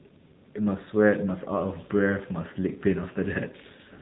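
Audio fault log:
throughout AMR narrowband mobile codec: speech cuts off sharply at 3.8 kHz and sounds plainly buzzy and synthetic, which fits a low mode around 7.4 kbps.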